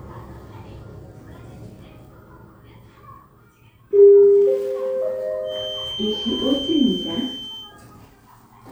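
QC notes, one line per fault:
5.42 to 7.76 s, feedback whistle: a thin, steady tone at 3.1 kHz sits behind the sound, roughly 10 dB under it, swelling and fading slowly in level before stopping. The likely cause is a loudspeaker-to-microphone loop held just at the edge of feedback, so one frequency keeps ringing without building up. On a spectrogram it shows as a narrow horizontal line at 3.1 kHz spanning those 2.3 seconds.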